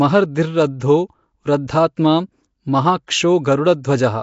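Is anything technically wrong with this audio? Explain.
Yes. The speech is coded at low quality throughout, and three sharp onsets are smeared by pre-echo.

Throughout the clip the speech carries a rough, hissy halo and a murky, underwater smear, and nothing is present above 7.7 kHz. The likely cause is Nellymoser compression, the old Flash microphone codec. It codes short blocks with a fixed, small bit budget, so weak bands get no bits and are refilled with noise. The damage is plainly audible and fits a bitrate around 32 kbps. On a spectrogram, content stops at a flat ceiling near 7.7 kHz, with grainy, blotchy noise patches in the higher bands.

Pre-echo occurs at 0.80 s, 1.68 s and 3.07 s. Each time, a short hiss lasting about 12 to 13 ms comes just before a sharp attack, and the attack itself sounds softened. The codec spreads its quantisation noise evenly across a whole block. When a loud onset lands late in that block, noise sized for the loud part also fills the quiet moment ahead of it. 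On a waveform, a thin fuzz rises just before each transient. A spectrogram shows a broadband smudge leading each attack.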